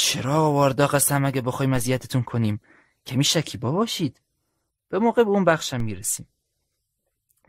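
A speech recording with a DC step at 5.80 s: the waveform's zero line jumps abruptly to an offset of about -23 dBFS. The sudden shift is heard as a single low thump, while the speech carries on unchanged. The offset does not hold. It drains away at a rate consistent with a high-pass of roughly 2 Hz somewhere in the chain, as when a converter recalibrates or an input carrying DC is switched in.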